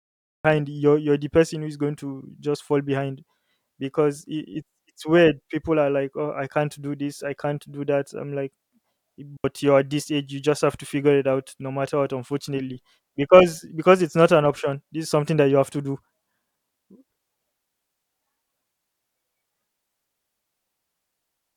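The speech begins with a cut-off start: digital silence runs to 0.45 s, then sound enters mid-flow at "you're you're the person" with no natural attack. Capture began late, so this is an abrupt onset rather than a fade-in, which would rise gradually.

At 9.37 s a digital wireless dropout mutes the link for about 77 ms, ending at 9.44 s just before "you're at this age". The receiver lost too much data and briefly faded to a clean hole. Unlike an analogue wireless dropout, it has no hiss or noise burst around the gap.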